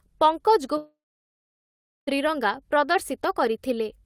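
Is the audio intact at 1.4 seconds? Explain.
No, at 1.4 s there is only silence after a fading buzz or hiss, within a long network dropout from 0.77 to 2.09 s, likely from about 1.3 s of lost audio.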